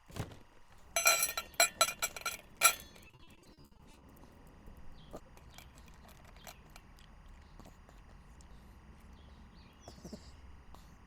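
Throughout, timecode bleed adds a steady chirping warble about 30 dB below the sound. Linear timecode leaks in as a square wave flipping between roughly 1 and 2 kHz, at a rate that fits 23.976-frame code. Its regular rhythm sets it apart from random hiss or a single-tone hum.

From 3.07 to 4.03 s, repeated packet loss produces choppy, robotic sound. Holes up to 60 ms long follow each other closely, and patching them by extending the last sound covers about 44% of the span. This smearing distinguishes it from clean dropouts to silence.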